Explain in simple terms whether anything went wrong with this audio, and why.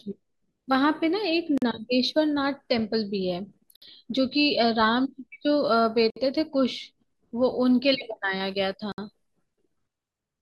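Four short dropouts cut into the speech at 1.58, 3.76, 6.10 and 8.92 seconds, each lasting about 44 to 61 milliseconds. They're a gap at a join of encoded pieces. The recording was encoded in separate chunks and stitched back together untrimmed, so each join kept the encoder's bit of lead-in silence and end padding. You hear a sudden tiny hole, softened at the edges, then the speech picks up where it left off.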